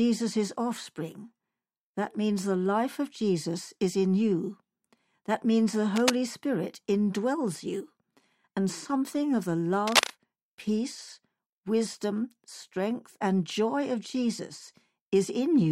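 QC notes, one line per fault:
5.96–6.12 s, cable scratch noise: a brief burst of dense, uneven scratching sits over the speech at about the same loudness. This is likely a worn cable or connector being moved, so its contact resistance jumps erratically and adds rough noise.
9.87–10.10 s, cable scratch noise: right after "and something of the" and before "peace wisdom strength and", a rustling scratch rises about 5 dB above the speech, again likely from unstable contact resistance in a disturbed cable or connector.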